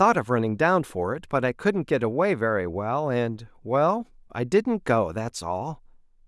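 No technical faults can be heard anywhere in this recording.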